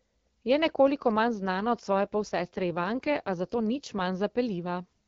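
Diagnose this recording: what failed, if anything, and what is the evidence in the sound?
Right after "nekoliko manj", from 1.34 s to 4.19 s, the speech turns rougher and more synthetic, then clears again. The audio band stays as wide as in the rest of the clip, and there is no gap or dropout. That points to an AMR rate drop at the network and codec stage. The radio link asked the AMR-WB (HD Voice) codec to step down, which fits a fall from 12.65 to 8.85 kbit/s, spending the freed bits on error protection before restoring the rate.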